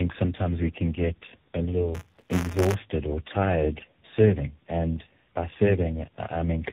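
Throughout, tandem speech coding makes the speech rough, muffled and warbly. It sounds like three speech codecs in a row.

From 1.94 to 2.74 s, between "we can get a" and "or tired serving and", buffer tearing adds a robotic 188 Hz buzz. Writer and reader have slipped, fitting a 256-sample buffer.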